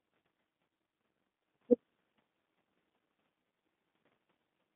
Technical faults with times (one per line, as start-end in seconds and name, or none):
0.00-4.76 G.729 codec
0.69 VoIP packet loss concealed by the speech codec